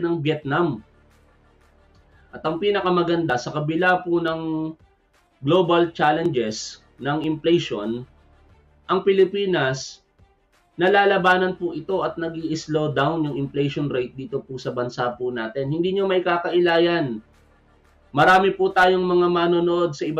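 Small skips land at 2.32, 3.30, 4.28, 6.26 and 7.24 s. Each one is an overlap between stream segments. Two segments claim the same stretch of time, so the player trims the overlap. That sound was never actually doubled. Between about 5 and 17 ms disappears each time, and the waveform jumps across the gap. The result is a click or tiny skip. They recur near one-second spacing, matching 1-second segments.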